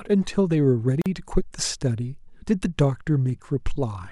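Separately encoded pieces of this speech were joined untrimmed, leaving a gap at a join of encoded pieces: a gap of about 43 ms from 1.02 to 1.06 s, with smeared edges.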